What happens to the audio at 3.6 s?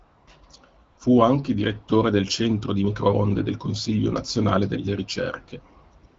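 Nothing goes wrong at 3.6 s: the speech carries on intact through that moment, with only the light coloration of the AMR wideband (HD Voice) codec running at 12.65 kbit/s.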